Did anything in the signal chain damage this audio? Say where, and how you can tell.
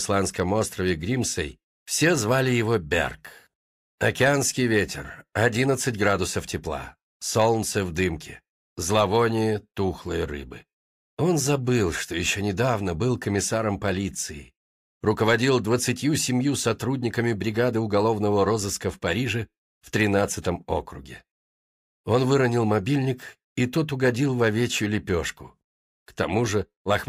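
No, nothing stood out on listening that would point to damage at any stage of the signal chain.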